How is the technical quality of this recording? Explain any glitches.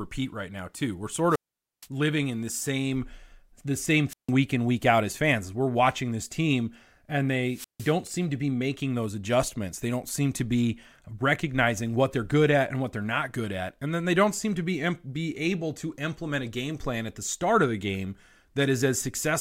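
The recording is marred by three wireless microphone squelch dropouts. The radio link fades, hiss rises, and the receiver's squelch mutes the speech to near silence before it returns.

The first runs from 1.29 to 1.88 s, with a mute of about 0.47 s, just before "living in the same". The second runs from 4.09 to 4.31 s, muting about 0.15 s between "the same" and "week in week out". The third runs from 7.47 to 7.96 s, muting about 0.16 s between "watching this team and" and "seem to be making".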